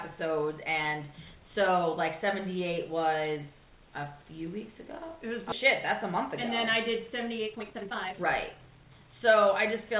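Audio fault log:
5.52–5.54 s, skip ahead: The audio lurches forward with no gap or fill, its two sides butted almost directly together, so material seems to vanish mid-flow. Around a second and a half is missing. The stretch was dropped, either on the way or by the receiver's jitter buffer, while later audio was already waiting, and playback jumped to that audio, which cut the delay by roughly the same amount in one step.
6.70–9.75 s, jitter buffer speed-up: For about three seconds the audio runs noticeably hurried, at 126% of normal speed, while its pitch stays unchanged. It sounds rushed rather than chipmunk-like. The jitter buffer was still holding more audio than it aims for, so the receiver trimmed many short slices, each one or a few pitch periods long, in quick succession. In total it shed something like 0.7 s to bring latency down, all within this 4 kHz-limited G.711 call audio.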